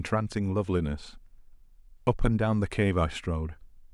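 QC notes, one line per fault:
No faults found in this speech clip. Nothing in the audio calls for a note.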